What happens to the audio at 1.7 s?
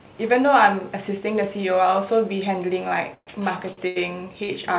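Nothing goes wrong at 1.7 s: the speech carries on intact, with only the narrow band of the call path, which has nothing above 4 kHz.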